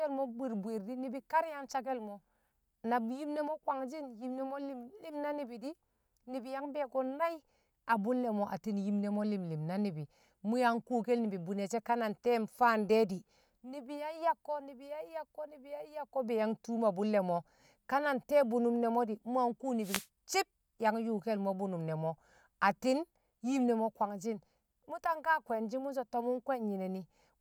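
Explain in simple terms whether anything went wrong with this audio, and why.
Something did go wrong, briefly. From 19.81 to 20.07 s, about a quarter of a second, a short swish of static washes over the speech. This is a wireless microphone noise hit. The radio link between the microphone and its receiver weakened for a moment as reflected signals cancelled each other, so the receiver's own hiss rose and covered the voice. Unlike a digital dropout, which goes silent or stutters, this fills the gap with rushing noise.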